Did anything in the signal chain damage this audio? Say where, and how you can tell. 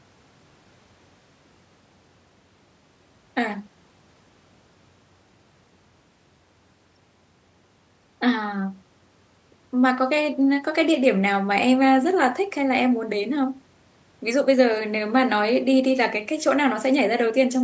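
No, nothing damaged it.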